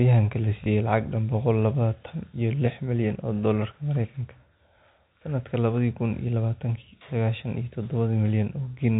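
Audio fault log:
0.64–0.66 s, packet loss with last packet repeated: a 20 ms packet dropped, so the previous one replays just before "lacag dhan boqol", giving a small blip.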